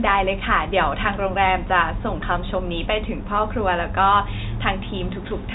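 No technical faults can be heard in this speech, which comes through G.711 telephone coding with nothing above about 3.8 kHz.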